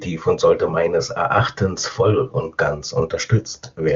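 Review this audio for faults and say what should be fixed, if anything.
Nothing here needs fixing: the speech has passed through the AMR wideband (HD Voice) codec at its top rate of 23.85 kbit/s, where any coding damage is at most faint, and no faults can be heard.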